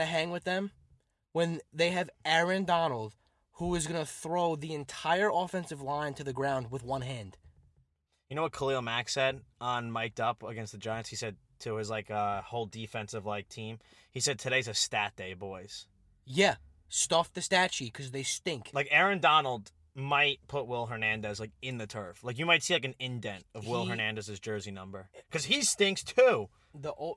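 A speech recording, and nothing in it is technically wrong.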